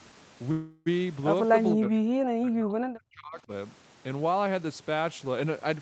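At 0.51 s a call audio freeze begins. The speech stretches into a fading sound until 0.88 s, then resumes intact. A delayed packet likely emptied the jitter buffer.

From 1.74 to 2.15 s, and again from 2.38 to 3.52 s, the speech is suppressed in double talk. It drops by about 40 dB, then about 35 dB. The likely cause is an echo canceller that mistook overlapping talk for echo.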